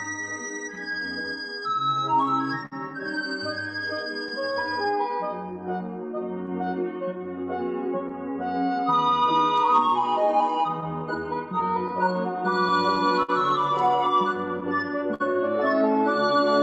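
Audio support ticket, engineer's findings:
Clock drift between sender and receiver, whole clip: sender clock running roughly 4% slow against the receiver, so the jitter buffer keeps draining and forcing corrections. Audio passes through a call codec whose top end stops near 8 kHz, consistent with Opus around 48 kbps.

Repeated timing corrections, 0.99–16.52 s: receiver repeatedly stretches short pieces, playing at about 98% speed and adding roughly 300 ms overall.

Short stall from a late packet, 2.66–2.73 s: packet missed its deadline and the buffer ran dry. Last sound held for 57 ms, then resumes where it left off. Nothing lost.

Scattered short gaps, 0.21–0.78 s: about three tiny lost or late packets, each patched by extending the prior sound, the longest around 10 ms.

Scattered short gaps, 10.80–15.22 s: about seven concealed holes, the longest around 50 ms. The receiver continues the last sound across each.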